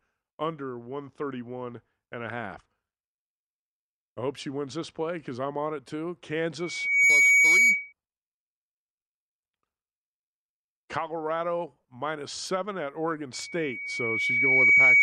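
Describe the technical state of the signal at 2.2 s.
The speech at 2.2 s is intact, with no audible fault at that point.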